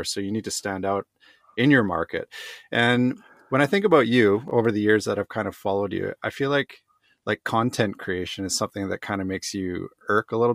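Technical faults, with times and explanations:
4.48 to 4.51 s, chunks out of order: a 10 ms chunk of the speech plays two chunks late, after the two that should follow it. Nothing is lost, but the 30 ms stretch comes out jumbled, with three hard joins.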